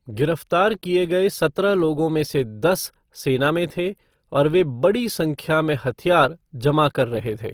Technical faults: Opus compression

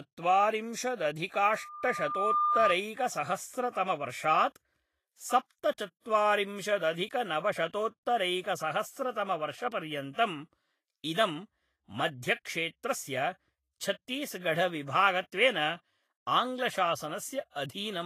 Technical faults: Vorbis compression; loudspeaker feedback squeal; pre-echo

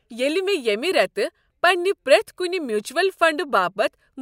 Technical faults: none

